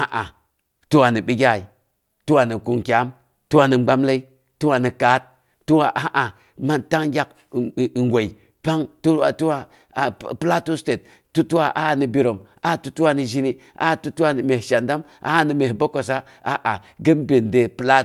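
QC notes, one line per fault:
Nothing to flag in this speech recording; I listened all the way through and there's nothing here that needs a note.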